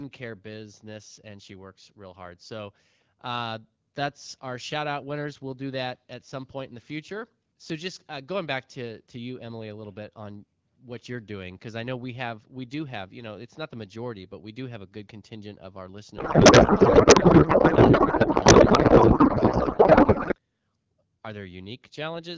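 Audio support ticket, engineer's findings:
Codec payload misread, 16.17–20.35 s, right after "good contingent of our": speech replaced by garbled warbling noise. Octet-aligned AMR frames parsed as bandwidth-efficient, so fields land in the wrong bit positions. Spectrogram shows smeared noise.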